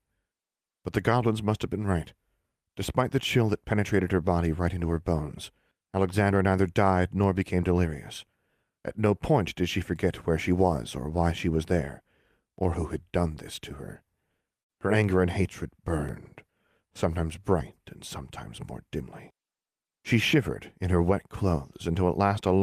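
A burst of packet loss hits the speech at 14.61 s and runs to 14.72 s. Several consecutive packets, or one long one, never arrived in time, so the receiver filled the hole by extending the last received sound for roughly 73 ms while fading it down, which is heard as a brief smeared, decaying tail. When audio resumes, about 60 ms of the original speech has been skipped.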